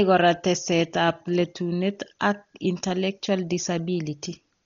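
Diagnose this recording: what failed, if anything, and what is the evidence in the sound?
Codec stage: throughout the speech nothing survives above 7 kHz, which shows as a hard, flat ceiling on a spectrogram, with speckled noise smeared between harmonics. This dull, fluttering roughness is likely Dolby Digital compression starved near 32 kbps, where bands given no mantissa bits are refilled with dither noise.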